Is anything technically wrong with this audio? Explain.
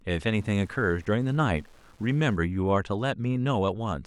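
Yes. From 0.0 to 2.37 s the speech carries Wi-Fi interference: a nearby radio's beacon, sent every 102.4 ms, is rectified by the audio circuit and heard as a steady ticking about ten times a second, roughly 35 dB below the speech.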